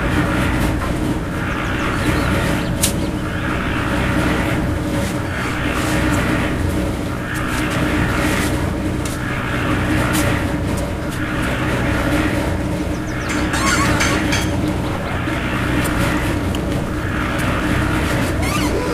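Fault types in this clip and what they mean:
Sample clock jitter: the converter's sampling clock wanders by a few microseconds rms, so each sample is captured slightly off its ideal instant. The resulting error scales with how fast the waveform is changing, and here it sits roughly 30 dB below the signal throughout. It is heard as a fine hiss or grit riding on the sound, strongest on loud, bright passages and dropping away when the audio falls quiet.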